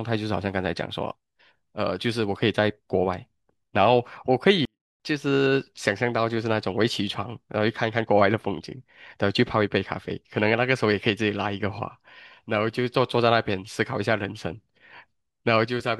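A speech clip with a 24-bit alignment error that makes one short stretch far too quiet, from 4.65 s to 5.00 s. Samples held as 24-bit integers in the low bytes of a 32-bit word are being read as full 32-bit integers, so each value lands 8 bits too low and the sound falls by about 48 dB while staying clean. On a waveform the trace collapses to a near-flat line for that third of a second; a spectrogram shows the same shapes, only much fainter.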